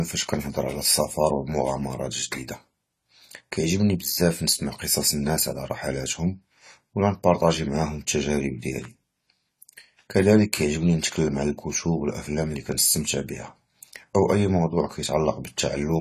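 Throughout the speech, the sound carries plainly audible codec damage that points to AAC compression, likely AAC-LC at a low rate that fits about 32 kbps. Nothing is present above 14 kHz, and the quantised spectrum leaves the speech dull and smeared, with a warbling, fizzy edge on sibilants.

At 8.84 s a sharp snap sits on top of the speech, lasting only a moment. It sounds like an electrical switching spike: likely a short arc from nearby switching gear picked up by the audio line.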